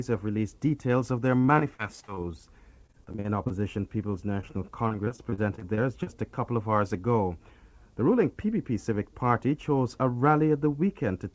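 Repeated packet loss (robotic sound) first appears from 1.40 to 2.18 s. Seven gaps fall in quick succession, the longest 48 ms. The receiver covers each one by extending the last sound it had, so about 27 percent of the stretch is synthetic continuation rather than real signal. The result is a choppy sound with fragments dropping out, heard through a band that stops at 8 kHz, which fits a 64 kbps G.722 call path.

Overlapping that, a jitter buffer slow-down runs from 1.83 to 2.45 s. With its reserve running short, the buffer stretched the audio by repeating short periodic chunks, adding 60 ms and playing this stretch at 92 percent speed. The pitch stays put while the sound drags and elongates.

Repeated packet loss returns from 2.82 to 3.52 s. This time there are ten gaps, the longest 41 ms, and about a quarter of the span is concealed. The repeated patching again gives a choppy, stuttering texture with pieces missing.

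A short concealed packet loss sits at 4.41 to 4.44 s. A single hole of about 20 ms was filled with 15 ms of continued sound and then cross-faded back into the real signal. It comes across as a brief smear or wobble rather than a break, and anything very short at that instant can disappear.

Repeated packet loss (robotic sound) strikes a third time from 4.88 to 6.08 s. Eleven gaps, none longer than 37 ms, are spread over a longer span, so only about 18 percent is concealed. The choppy quality is a little thinner here but lasts over a second.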